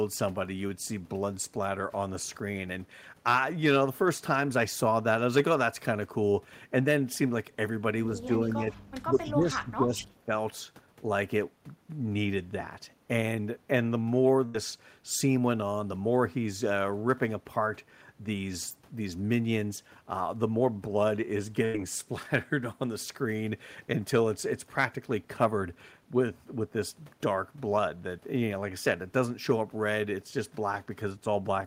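It's a speech recording, and around 8.16 to 8.7 s and again from 9.11 to 10.33 s the talker dips by roughly 10 and then 15 dB for a few hundred milliseconds to about a second. That's speech suppressed in double talk, likely an echo canceller ducking both sides while the far end talked. Inside that second stretch, at 9.18 to 9.32 s and 9.99 to 10.03 s, you can catch a faint delayed copy of the voice about 157 ms behind, sitting roughly 15 to 20 dB under the speech. That's an echo leak, likely where a loudspeaker echo slipped past the canceller and came back. Then at 14.45 to 14.55 s and 21.65 to 21.75 s there's a burst of packet loss: about 90 ms goes missing each time, the receiver stretches the last sound out for nearly that long as it fades, and the speech picks up again further on.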